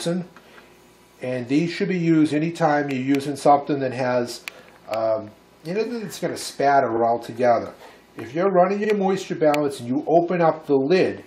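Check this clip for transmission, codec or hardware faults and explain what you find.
There are two spots of repeated frames, at 6.96 s and 8.84 s. Each time, a 46.4 ms chunk (about what a pair of compressed frames would hold) got written or sent twice. The decoder plays it again, so you hear a quick stutter, and each repeat stretches the audio by 46.4 ms.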